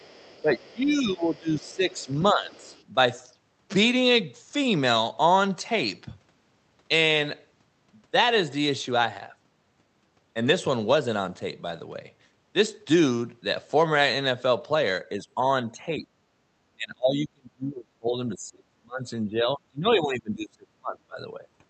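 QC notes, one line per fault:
0.00–0.43 s, 1.35–2.14 s, 2.52–2.85 s: other side's voice leaking through. Faint scraps of a second talker sit under the main speech, about 30 dB down in the first and last bursts and about 35 dB down in the middle one. The likely cause is residual loudspeaker echo: the far end played into the microphone, and the echo canceller removed most of it but not all.
0.42–2.75 s: speech suppressed in double talk. During this opening stretch the main talker's level sags and breaks up across roughly two seconds, with the deepest dip around 15 dB. The overlap with the leaking second voice points to the likely cause: both ends were talking, the canceller could not separate near speech from echo, and it attenuated everything.
15.09–15.37 s, 15.70–16.25 s, 16.76–21.41 s: speech suppressed in double talk, recurring. The talker ducks repeatedly, likely as the canceller again treats the signal as echo. 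The first dip is slight, about 5 dB. The second reaches about 25 dB. The long final stretch loses about four seconds in pieces, dropping as far as about 30 dB. This happens over call audio whose bandwidth tops out near 8 kHz.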